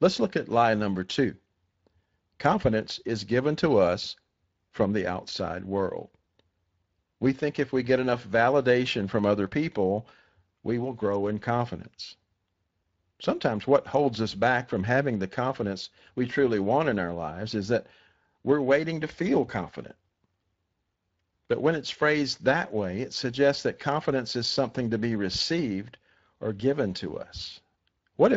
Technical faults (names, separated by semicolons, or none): Speex codec